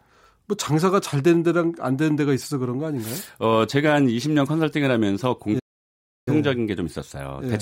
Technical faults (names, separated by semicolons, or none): playback stall